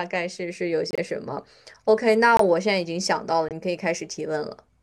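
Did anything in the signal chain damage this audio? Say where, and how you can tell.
Yes, corrupt frame muted at the codec stage: abrupt silent holes at 0.89–1.0 s, 2.37–2.41 s and 3.49–3.53 s, where the decoder rejected damaged frames and silence replaced them without shifting timing.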